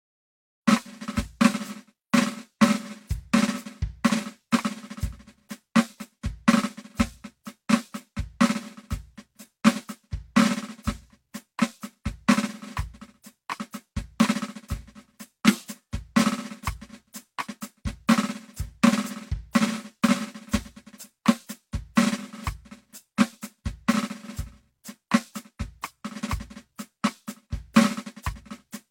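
This music clip has no technical faults; the only level change is a smooth fade-in at the opening, beginning at around half a second and reaching full level by 0.69 s, with no click or hard edge.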